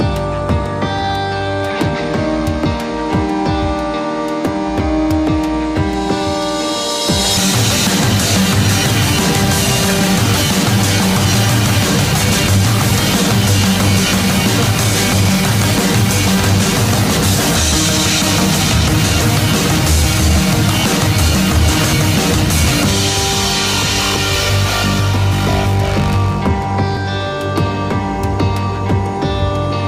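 At 7.37 s and 26.97 s the sound skips abruptly, dropping about a fifth of a second, which is likely audio missing between chunks of roughly 10 s.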